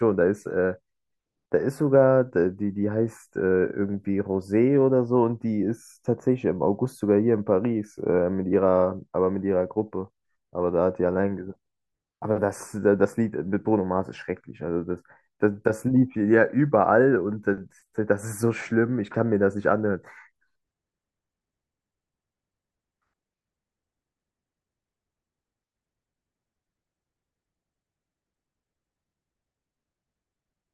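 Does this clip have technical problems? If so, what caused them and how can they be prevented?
No, nothing in this speech recording points to a technical fault, so there is no cause to trace and nothing to prevent.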